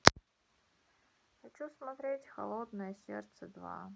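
No technical faults can be heard in this speech recording.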